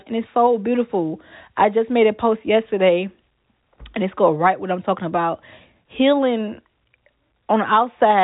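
Telephone-band speech with nothing above 3.8 kHz, consistent with G.711 A-law coding at 64 kbps, shows no technical faults.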